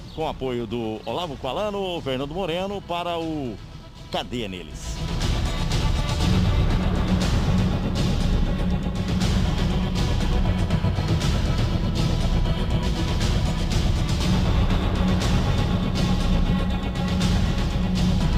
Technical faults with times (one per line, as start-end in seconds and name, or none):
none